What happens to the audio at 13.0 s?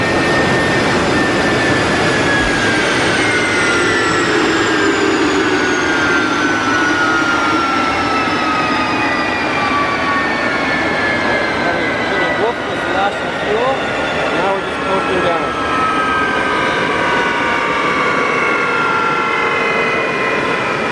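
Nothing goes wrong at 13.0 s, and the audio plays through that moment intact.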